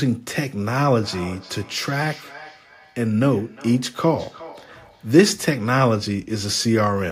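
A speech recording in which, from 0.82 s to 5.29 s, the talking comes back as a faint delayed repeat roughly 400 ms behind, peaking at about 19 dB below the direct speech. This is feedback echo between two devices: one device's microphone recaptures the call audio played by another, and neither echo canceller removes it.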